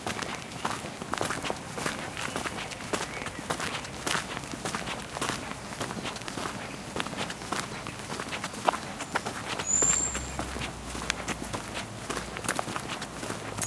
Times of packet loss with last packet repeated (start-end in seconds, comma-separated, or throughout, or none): none